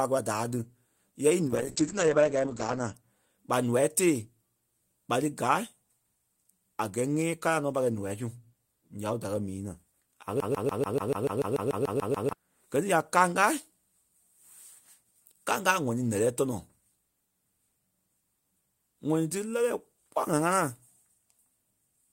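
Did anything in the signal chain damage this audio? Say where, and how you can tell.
Yes. A call bitrate drop runs from 1.49 to 3.00 s, ending just before "ɓa noa tée". The network's bandwidth estimate fell, so the Opus encoder went from 32 to 9 kbps for about 1.3 s. The speech turns coarse and muffled as audio bandwidth shrinks from 20 kHz to 8 kHz.

A broken-record loop runs from 10.40 to 12.33 s. A 145 ms fragment repeats exactly, 13 times back to back, and the speech that belonged there is gone. The likely cause is a stalled stream or playback buffer resending the last fragment it held.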